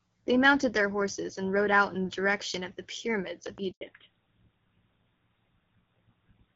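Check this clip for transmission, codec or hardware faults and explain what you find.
Three faults appear, all clustered just before the 4-second mark.

Loud pop, 3.47 to 3.6 s: two sharp pops land in quick succession, a few decibels above the speech, which continues underneath. A plug, switch or static discharge is the likely cause.

Handover gap, 3.71 to 3.81 s: the speech fades quickly and goes silent for 100 ms. The call was switching networks, and no speech frames arrived meanwhile.

Fallback to narrowband, 3.81 s to the end: everything above 4 kHz disappears. The speech turns duller and rougher. Before this point the wider band sounds like HD Voice, which fits AMR-WB at 12.65 kbit/s. After it, the sound points to an older narrowband codec such as GSM full rate.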